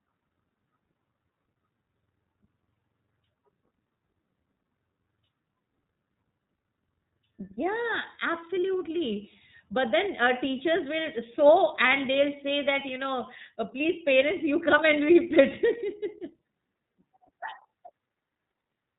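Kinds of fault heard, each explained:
iLBC codec: The speech went through a narrowband VoIP codec that codes each frame's excitation independently of the previous one. The frame length points to 30 ms, which fits the lower-rate mode near 13 kbps. Nothing above 4 kHz survives, so the speech sounds thin and telephone-like. The codec damage is plainly audible throughout the clip: the speech stays clear but has a rough, slightly synthetic texture.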